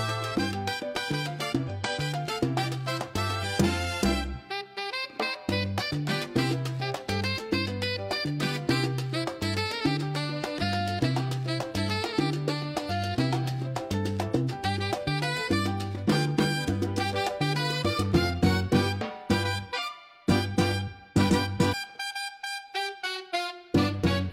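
Short glitches, each about 50 ms long, break into the sound at 1.64, 3.39, 12.86, 19.73 and 21.70 s. These come from damaged data in a compressed stream: corrupted bytes make the decoder misread frames, lose sync and hunt for the next valid frame header.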